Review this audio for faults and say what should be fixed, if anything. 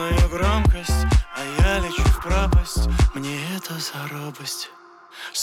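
No faults turned up in this audio, so nothing needs to be fixed.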